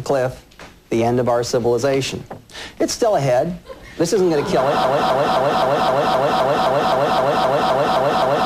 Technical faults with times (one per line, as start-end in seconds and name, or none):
4.84-8.46 broken-record loop